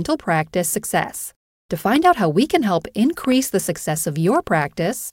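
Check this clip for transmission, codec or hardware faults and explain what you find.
Two hardware-type faults stand out, both loud pops in this speech clip. The first runs from 1.96 to 2.07 s, just before "how we can help"; the second from 3.25 to 3.34 s, after "how we can help" and before "the success". Each is a double pop about 10 dB above the speech, likely from an electrical pulse such as static or a switch entering the chain. Unlike a dropout, the speech continues intact beneath each thump.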